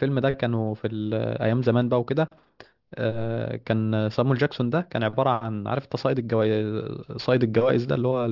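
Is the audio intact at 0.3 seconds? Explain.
No. At 0.3 s the speech already carries aliasing, present throughout. It was downsampled from 48 kHz to 12 kHz without a low-pass filter, so content above 6 kHz folds back into the band as false tones. These land about 30 dB below the signal, and sibilants come out gritty and metallic.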